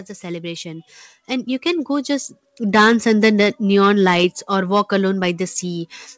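Speech passed through a call path, where nothing above 8 kHz comes through, consistent with a wideband codec such as G.722, carries an automatic gain rising fault from 0.2 s to 3.14 s. The gain control judged the input too quiet and raised its gain slowly, by about 10 dB, before settling just before "the neon lights or". Unlike a talker leaning toward the microphone, the background noise swells at the same rate as the voice.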